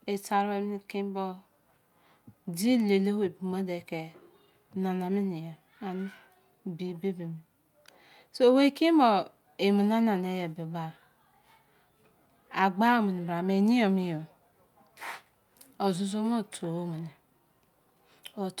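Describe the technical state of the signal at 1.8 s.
At 1.8 s the speech signal is intact, with no fault audible at that moment.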